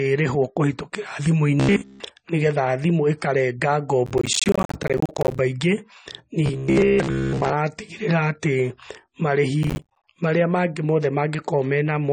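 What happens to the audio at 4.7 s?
At 4.7 s the speech is inside a burst of processor overload crackle from 4.06 to 5.39 s, just after "thimũ ikarenga". Buffers of roughly 10 ms keep missing their deadlines and fall to silence, producing gritty tearing. The waveform shows dozens of hard-edged gaps, and the spectrogram shows broadband vertical streaks. Underneath, the sound is dull with mixed compression artefacts, likely from transcoding between lossy codecs (MP3 then AAC-LC). The spectrogram is empty above 9 kHz.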